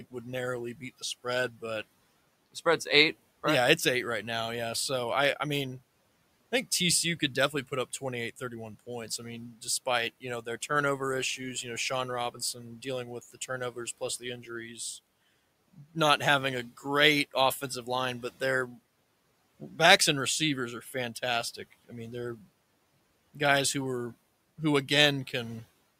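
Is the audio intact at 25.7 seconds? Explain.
Yes, the audio is intact at 25.7 seconds, with only the room's own background noise sitting about 26 dB below the speech.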